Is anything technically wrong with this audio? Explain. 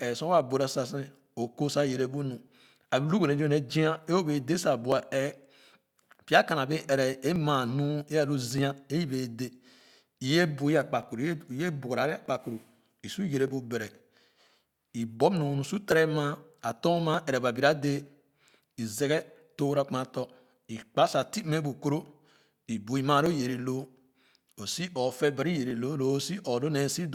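Yes. From 1.26 s to 26.93 s the speech carries a regular click roughly every 1.22 s, about twenty in all. These are clock drift buffer slips. The likely cause is two devices running on separate clocks that disagree by several hundred parts per million. The buffer between them creeps toward empty or full until a short block of samples, on the order of fifty, is dropped or repeated. Each slip is heard as a brief tick.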